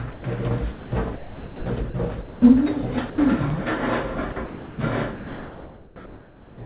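At 0.12 to 0.24 s the sound gives way to steady comfort noise for 120 ms. This is sound dropped by the voice detector: the sender likely judged the material too quiet to matter, stopped transmitting, and the receiver filled the gap with synthetic comfort noise. The noise has a single, smooth texture. That sets it apart from a glitch or packet loss.

From 0.72 to 1.94 s the sound is chopped by the voice detector. The sender likely switched repeatedly between sending and muting, so about 740 ms in total is comfort noise, spread across two or more pieces rather than one block. The result is choppy, with quieter elements clipped away. The repeated holes are what distinguish it from a single clean dropout.

At 2.22 to 2.42 s, 200 ms is replaced by comfort noise, with about 170 ms of real sound missing, again likely a voice-detector drop. At 3.10 to 3.18 s an 80 ms stretch goes to the same steady comfort noise, and the likely cause is the detector once more.

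At 3.50 s there is an underrun with a held sample. The output buffer ran dry for about 5 ms and the converter froze on its last value. The waveform flattens at a non-zero level, so the sound stops for an instant with almost no click. Unlike the detector faults, no noise is inserted during the gap. There is only a brief, dead hold.

From 4.32 to 4.78 s the sound is chopped by the voice detector again, likely from the detector toggling, with 360 ms of comfort noise broken into fragments.

From 5.16 to 5.96 s, 800 ms turns into steady comfort noise, and about 480 ms of actual sound is lost. This is the longest drop and is likely the detector holding off until the sound grew strong enough to trigger it.

Throughout, nothing is heard above 4 kHz, which fits a narrowband G.711 A-law call path at 64 kbps.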